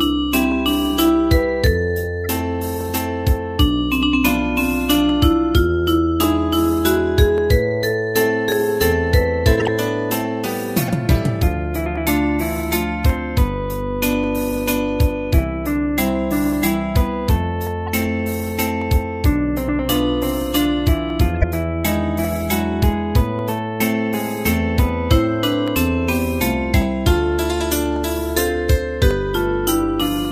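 A regular click or pop recurs every 1.14 s from 0.52 s to 30.25 s, about thirty in all. This is likely clock drift buffer slips: two free-running clocks disagreeing by a few hundred ppm, so a buffer overflows or runs dry and drops or repeats a small block of roughly fifteen samples each time.

Short chirps and noise bursts break through at 2.24 s, 9.56 to 9.68 s, 10.86 to 10.90 s, 17.86 to 17.89 s and 21.36 to 21.44 s, ranging from faint to strongest at 21.36 s. Each is a corrupt frame decoded: damaged compressed data played anyway, spraying energy at wrong frequencies for a few frames.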